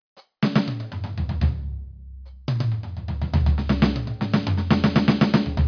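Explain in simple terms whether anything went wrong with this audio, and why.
Nothing went wrong; the music sounds as it should.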